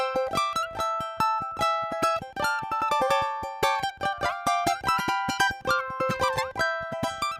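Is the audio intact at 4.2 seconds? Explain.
No. At 4.2 seconds the audio is read two samples at a time (double speed), a fault running through the whole clip. Pairs of samples are taken as single frames, so playback runs twice as fast and a full octave (12 semitones) high.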